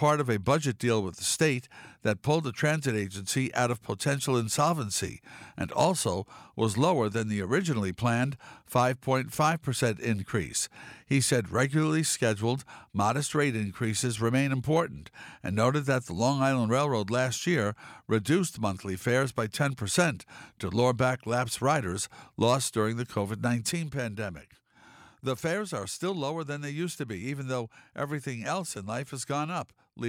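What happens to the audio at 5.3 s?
Nothing goes wrong at 5.3 s; the audio plays through that moment intact, with no dropout, click or distortion.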